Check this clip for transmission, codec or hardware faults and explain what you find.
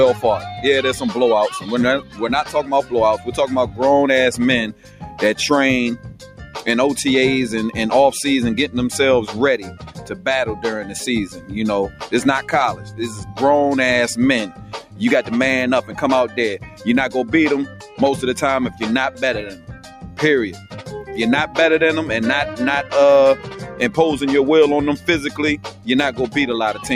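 The clip shows processing faults rather than transmission or hardware errors: a speech-oriented noise suppressor is acting on non-speech material.

Noise suppressor applied to music or sounds, throughout: the suppressor treats sustained and ambient content as noise and applies varying attenuation, swinging by roughly 10 dB. Onsets pass, but held portions and decays are pulled down, so the level pumps and the sound thins.

Sound cut by the noise suppressor, at 0.14–6.61 s, 9.58–13.4 s, 14.48–21.56 s, 23.36–23.8 s and 24.97–26.86 s: in these spans the suppressor attenuates steady and fading content harder, with drops of about 11, 10, 11, 6 and 10 dB. Tails shorten and sustained sound sinks audibly.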